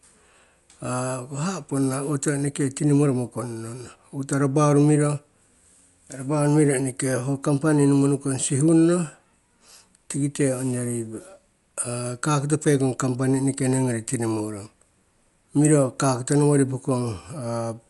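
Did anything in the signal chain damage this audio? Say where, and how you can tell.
Yes, at the codec stage, throughout the clip. The speech is dull and the top end stops abruptly at 11.4 kHz, with a rough, fluttering noise clinging to voiced tones. The likely cause is Dolby Digital compression at a low bitrate, which fits something near 64 kbps. The encoder narrows the band and leaves many frequency lines without mantissa bits, which the decoder fills with dither noise. A spectrogram would show a hard ceiling at 11.4 kHz and grainy, speckled noise around the harmonics.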